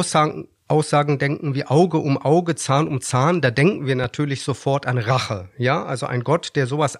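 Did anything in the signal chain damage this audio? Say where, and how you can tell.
Yes: a single loud pop at 4.04–4.06 s, between "da denken wir" and "sofort an", a few dB above the speech, likely an analogue voltage transient from a plug or static.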